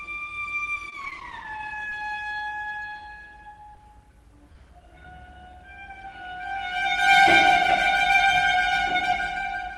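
From 0.75 to 1.92 s the audio turns choppy, with small pieces dropping out. This is repeated packet loss: eleven short gaps, the longest about 21 ms, each filled by stretching the preceding sound, so roughly a tenth of that stretch is synthesized. Later come three brief smears or wobbles, at 3.75 s, from 4.53 to 4.55 s, and at 5.04 s. Each is a short concealed packet loss, where about 10 ms of audio arrived too late and was bridged by extrapolation before blending back. The call codec's band limit near 12 kHz is present throughout, consistent with Opus at around 32 kbps.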